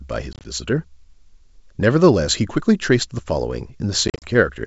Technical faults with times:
0.33-0.45 packet loss on an ADPCM call
4.08-4.28 packet loss on an ADPCM call

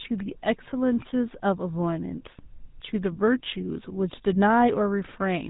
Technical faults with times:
0.00-5.50 GSM full-rate codec

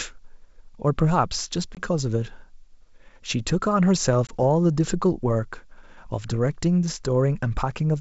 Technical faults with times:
1.75-1.81 packet loss on an ADPCM call
4.27-4.34 packet loss on an ADPCM call

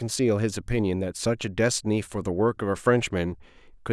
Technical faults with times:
none

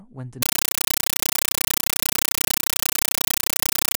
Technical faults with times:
0.42-3.97 compressed stream played as audio

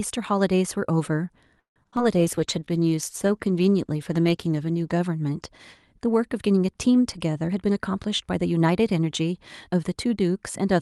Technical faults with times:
1.59-1.78 call audio freeze
1.84-1.87 skip ahead
1.91-1.99 short concealed packet loss
2.15-4.99 call bitrate drop
2.35-3.28 jitter buffer slow-down
7.47-9.21 jitter buffer speed-up

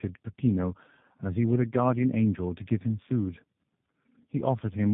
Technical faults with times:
0.00-4.94 tandem speech coding

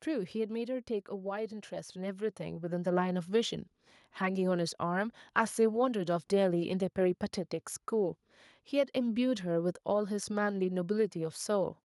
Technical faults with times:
0.05-0.93 automatic gain falling
1.23-3.77 automatic gain rising

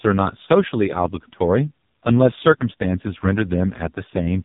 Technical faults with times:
0.00-4.45 AMR narrowband mobile codec

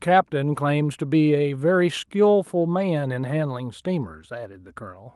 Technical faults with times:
none

